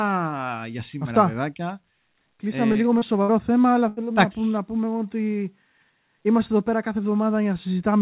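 At 2.72 s, just before "λίγο με", and again at 2.99 s, short concealed packet loss: about 30 ms of the call arrived too late each time, so the receiver extended the preceding sound, leaving a brief smear. A burst of packet loss follows at 3.22 to 3.31 s, between "λίγο με" and "θέμα αλλά", and at 3.88 to 3.99 s, before "να πούμε να πούμε". Roughly 60 and 90 ms went missing, which the receiver covered with a fading continuation of the last sound before jumping ahead. Throughout, the call codec, which sounds like G.711 A-law, leaves nothing above 4 kHz.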